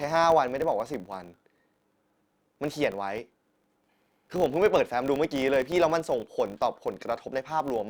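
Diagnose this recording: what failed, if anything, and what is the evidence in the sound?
A filter restarted on every block in the processing stage produces a 50 Hz buzz, fitting 20 ms blocks, that follows the speech level throughout, visible as evenly spaced vertical ticks.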